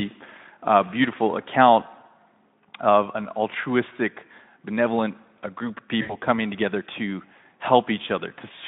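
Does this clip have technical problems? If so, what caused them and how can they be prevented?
Yes. VoIP packet loss concealed by the speech codec occurs at 6.01–6.17 s, after "benevolent a group of". About 80 ms went missing, consistent with four 20 ms frames, so the decoder repeated its last pitch with falling gain. A spectrogram shows smeared, fading harmonics before "coming together to". Forward error correction and a steadier network prevent it.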